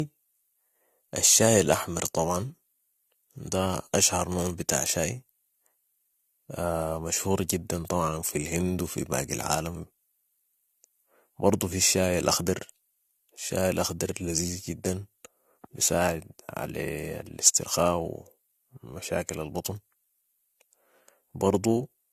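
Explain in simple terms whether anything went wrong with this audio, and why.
The speech shows generation loss. It was most likely compressed, played back and compressed again several times over, roughly four rounds, with each pass throwing away a bit more detail. Throughout the clip, that stacked damage makes the speech sound swirly and hollow, with a smeared quality. Sharp starts of sounds lose their crispness, and nothing above about 14 kHz remains, so the top end sounds dull.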